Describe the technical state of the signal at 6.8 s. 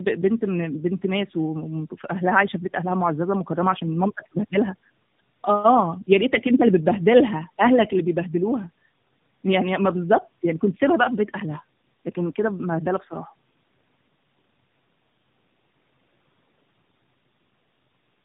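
At 6.8 s, as throughout the clip, the speech carries tandem speech coding. Its rough, warbly texture fits two AMR-NB passes in a row, each re-encoding the last one's damage. Nothing sounds above 3.7 kHz, and the muffling exceeds what one codec pass leaves.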